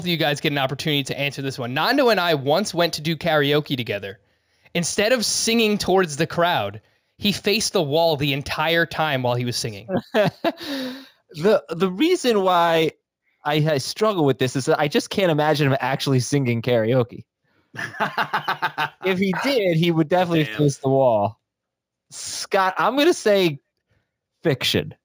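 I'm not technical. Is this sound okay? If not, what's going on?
No. All the way through, the speech sounds dull at the top, with a faint metallic shimmer clinging to hissy sounds like s and sh. That comes from imaging from linear upsampling. The recording was converted to a higher sample rate by simply joining the original points with straight lines. That rough method softens the crispest sounds and leaves faint mirrored copies of the real sound above them, and you hear those copies as the shimmer.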